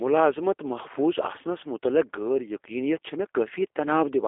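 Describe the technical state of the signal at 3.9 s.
At 3.9 s the speech still carries G.729 codec damage, present across the whole clip. The codec rebuilds each frame from a vocal tract filter and a few pulses, giving a rough, synthetic texture consistent with 8 kbit/s. A spectrogram shows energy confined to roughly 300 Hz to 3.5 kHz, with an empty band above 3.7 kHz.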